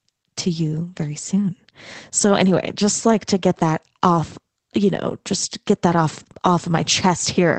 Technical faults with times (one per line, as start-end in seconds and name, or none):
none